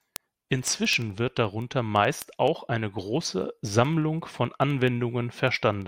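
From 0.16 to 5.82 s there are word clock ticks, about ten a second, as an unlocked receiver's clock drifts a few hundred ppm and slips one sample each time.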